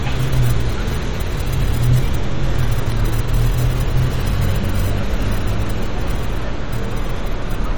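The recording has plainly audible MP3 compression damage from start to finish. The texture sounds watery and swirly. Weak detail flickers in and out as the encoder drops low-level frequency lines from one frame to the next, and sharp onsets lose their edge. The damage is heavy enough to suggest a low bitrate, around 48 kbps. The top end is cut off above about 21 kHz. The likely cause is lossy MP3 encoding with too few bits.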